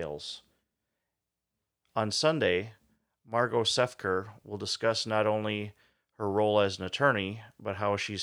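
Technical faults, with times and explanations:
No technical faults detected in this speech recording.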